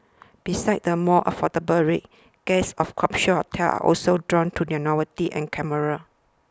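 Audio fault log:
Nothing stood out on listening to this speech recording.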